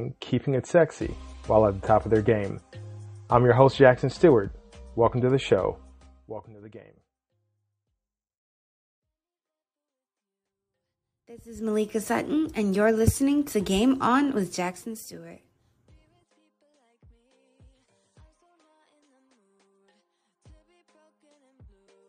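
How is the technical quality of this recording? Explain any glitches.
There's some zipper noise in three level moves: a drop of around 20 dB from 5.94 to 6.53 s, a rise of similar size from 11.38 to 11.73 s, and a dip of roughly 15 dB from 14.37 to 15.16 s. The gain jumps in unsmoothed steps of about 1 dB or less, around forty times a second, so each step clicks and you hear a fast ticking zip riding on the sound.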